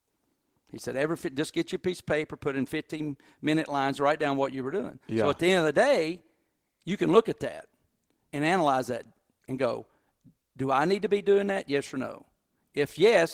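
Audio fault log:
No technical faults can be heard in the recording.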